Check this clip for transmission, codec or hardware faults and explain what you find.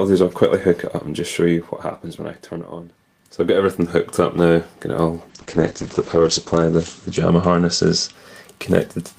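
There's one problem here, a call bitrate drop from 5.3 to 8.19 s. The encoder got starved, so coding turns coarse and the top end collapses from 20 kHz to 8 kHz, sounding muffled and rough. At its worst, for about 1.08 s, it fits roughly 9 kbps, down from around 32.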